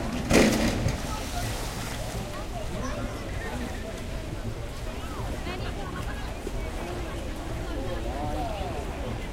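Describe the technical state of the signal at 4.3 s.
At 4.3 s the signal is intact, with no audible fault at that moment.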